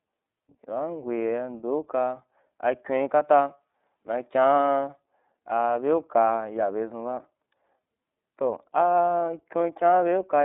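From start to finish the speech sounds thin and boxed-in, with a slightly rough, synthetic edge that is plainly audible. Nothing reaches above about 3.8 kHz, and the usable band runs from roughly 250 Hz to 3.6 kHz. This is the iLBC codec at work. It codes each 30 ms frame's excitation on its own, without drawing on the previous frame, which fits its 13.3 kbps mode and gives the narrowband, faintly artificial texture.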